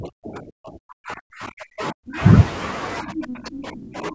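From 0.0 to 2.18 s the speech sinks and breaks up, by up to about 40 dB. This is likely speech suppressed in double talk, with the echo canceller ducking everything. From 3.03 s to the end it dips again, by about 25 dB. Between 3.29 and 3.36 s a brief second voice slips through, about 5 dB below the speech. That is likely the other side's voice leaking through as uncancelled loudspeaker echo.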